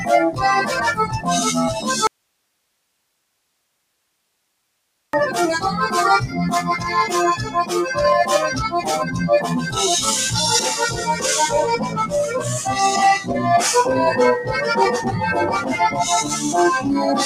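A speech-oriented noise suppressor runs over the whole clip, treating sustained, non-speech material as noise. Its gain moves through a range of around 10 dB, so attacks come through while held content and decay tails are pulled down, which gives the sound a pumping, uneven level and a thinned-out body. This noise suppressor, applied to music or sounds it was not designed for, shapes the entire clip.

The first clear instance of sound cut by the noise suppressor falls at 1.01 to 1.27 s. The suppressor pushes that passage down by as much as about 11 dB for roughly a quarter to a third of a second. The affected sound sinks against its surroundings and then recovers.

From 2.07 to 5.13 s the signal drops out for about 3.06 s, leaving only hiss far below the normal programme level, somewhere around 50 dB down. The loss and the return are both abrupt, not a fade or a natural pause. That points to an audio dropout to a faint residue, likely a break upstream of a stage that stayed live and kept passing its own noise floor.

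The suppressor cuts the sound again at 7.39 to 7.56 s, with a dip of about 9 dB, then at 9.05 to 9.20 s and 11.80 to 11.98 s, each about 7 dB. Each lasts roughly 150 to 200 ms. These briefer cuts clip sustained portions and tails while onsets survive, adding short flutters in level across the later part of the clip.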